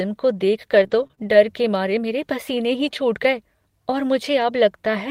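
From 0.71 to 1.33 s, between "को देख" and "के मारे मेरे पसीने", the speech shows repeated packet loss with a robotic sound. Four short holes, the longest 23 ms, are patched by stretching the previous sound, so about 75 ms is filled and about 80 ms is missing. The result is choppy and robotic. On a spectrogram, frozen, smeared harmonic strips sit between abrupt vertical seams. The waveform shows repeated cycles and small discontinuities.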